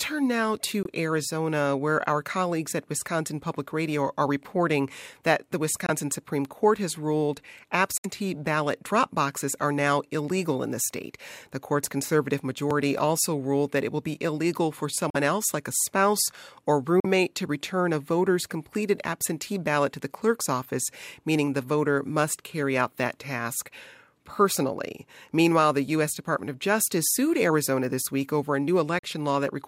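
A Bluetooth link to the headphones was likely failing to deliver packets in time in this speech clip, and each Bluetooth dropout leaves a silent hole before the speech resumes further on, as if it had continued underneath. Holes fall at 0.83–0.87 s, 5.86–5.90 s, 7.98–8.06 s after "has ruled", 15.10–15.16 s, 17.00–17.05 s after "like a spouse or", and 28.99–29.05 s after "this week over a". Their lengths of 21.3, 42.7 and 64.0 ms fit one to three lost packets of about 21 ms each.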